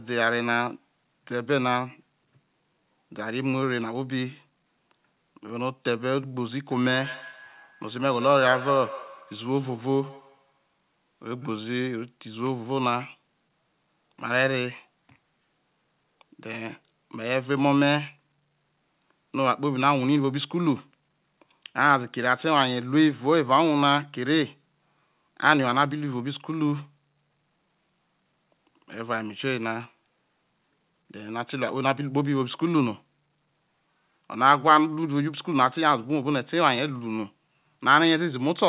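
Speech recorded over a call path with nothing above 4 kHz, which fits a G.711 telephone codec, shows feedback echo between two devices from 6.71 to 11.69 s, with speech returning roughly every 150 ms at about -15 dB below the talker.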